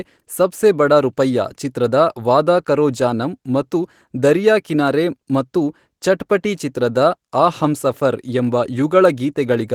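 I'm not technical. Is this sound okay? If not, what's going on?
Yes, nothing has gone wrong in this speech recording. It has been compressed with Opus voice compression, which leaves only a faint trace here and keeps the full range of sound, from low to high.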